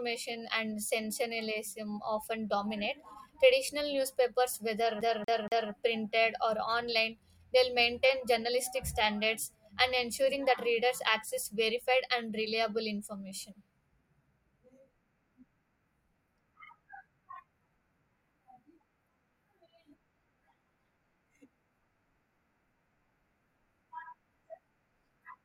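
From 5.01 s to 5.72 s the speech catches in a CD stuck on one turn: a fragment about 236 ms long plays three times in a row, with a brief mute at each jump, before playback moves on into "printed or". A scratch or read error sent the laser back one track at the same point on successive revolutions, so the same slice repeats at a fast, even rate.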